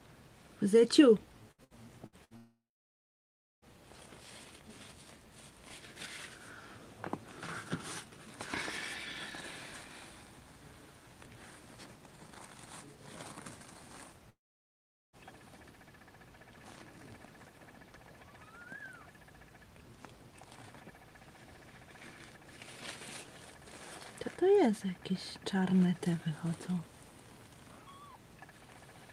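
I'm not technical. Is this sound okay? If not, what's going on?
No, it has two kinds of problem.

Repeated packet loss (robotic sound), from 1.51 to 2.34 s. The audio travels in small pieces, and four of them went missing here, the longest gap lasting about 67 ms. Each time, the player filled the hole by stretching the last bit it had, so about a third of this stretch is patched sound. That makes it choppy, with short bits missing.

Long network dropout, from 2.37 to 3.65 s and again from 14.30 to 15.16 s. The sound briefly trails off as a fading buzz or hiss, then goes silent for about a second the first time and about 0.8 s the second time before returning. The likely cause is that the connection stopped delivering audio altogether, so whatever was said or played in those gaps is gone.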